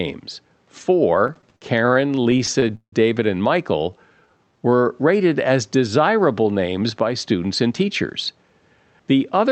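Repeated stalls (stutter) run from 1.27 to 2.95 s: packets kept arriving late, so the jitter buffer emptied 19 times, and each time the receiver stretched the last sound, fading it during the longer waits, the longest about 171 ms. Around 447 ms of concealed fill covers some 27 percent of that span. Nothing is lost, but the speech drags and stutters through the stretch.

A jitter buffer slow-down follows from 3.69 to 4.77 s. With its reserve low, the receiver repeated single pitch periods or bits of pauses over and over, adding about 153 ms and playing the speech at 87 percent speed. Pitch stays where it was, so syllables sound drawn out rather than lowered, and a faint warble can creep in as the same short cycle recurs.

A jitter buffer speed-up runs from 6.65 to 8.54 s. Now the buffer held more than its target, so the receiver trimmed short pieces of one or a few pitch periods again and again, removing roughly 150 ms in all. 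The speech plays at 109 percent speed with unchanged pitch and comes across hurried. Throughout, the call path's codec, which fits Opus at around 64 kbps, limits the audio to about 8 kHz.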